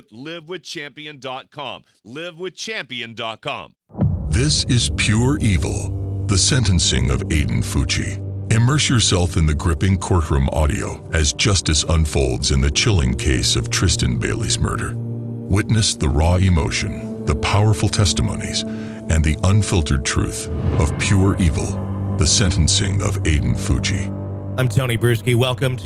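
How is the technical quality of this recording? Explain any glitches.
Nothing to flag here: there are no glitches anywhere in the recording, and it holds together steadily all the way through.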